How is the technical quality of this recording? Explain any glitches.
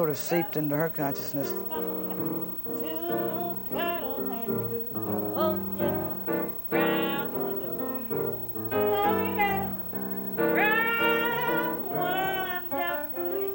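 There is one glitch: a bit error spike at 1.84 s. A flipped bit corrupts two adjacent samples, jumping their value by a power of two before returning, giving one sharp broadband tick peaking near -30 dBFS. Unlike a dropout click, no audio goes missing around it.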